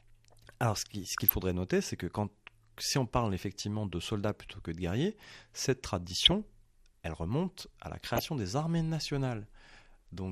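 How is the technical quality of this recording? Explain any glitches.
The recording is speech with plainly audible codec damage throughout and three short bursts of reception errors.

MP2 compression, throughout: the speech sounds dull, with a granular, gurgling roughness. This is likely caused by MPEG Layer II coding at a low rate, which fits something around 80 kbps. The codec divides the spectrum into 32 sub-bands and shares out a limited bit budget, so upper bands drop out and flicker while the remaining bands are coarsely quantised.

DAB burbling, at 1.04 to 1.33 s (just before "noter c'est que quand"), 6.09 to 6.31 s (after "que de guerriers cette") and 8.01 to 8.23 s (between "elle remonte à la" and "des armées"): burbling breaks over the speech. Bit errors at a few tenths of a percent slipped past error correction into the MP2 data. Each burst spans roughly a dozen frames. Corrupted samples put short noise blips into single sub-bands, and corrupted scale factors make sub-bands jump in level for up to a frame.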